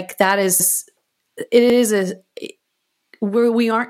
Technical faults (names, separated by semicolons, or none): overlapping chunks